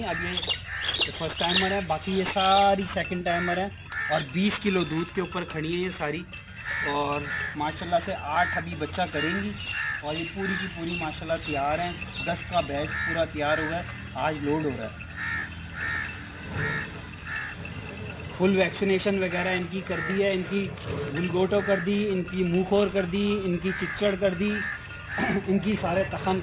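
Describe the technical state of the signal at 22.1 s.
At 22.1 s, as through the whole clip, aliasing is present: content above 4 kHz folded back into the band when the rate dropped, which fits a 8 kHz resample. Unlike a plain low-pass, the top isn't just dull; it carries gritty, unrelated tones only moderately below the signal.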